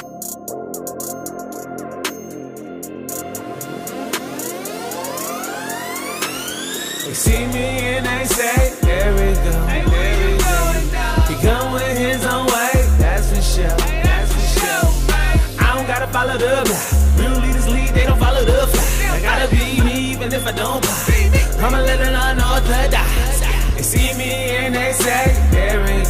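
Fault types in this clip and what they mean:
No technical faults can be heard; the signal stays steady, with no breaks, distortion or glitches anywhere in the clip.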